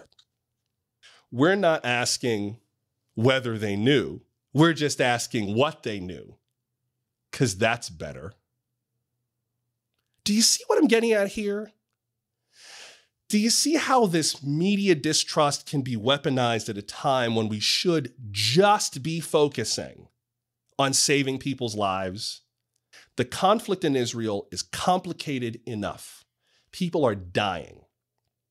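No technical faults are audible.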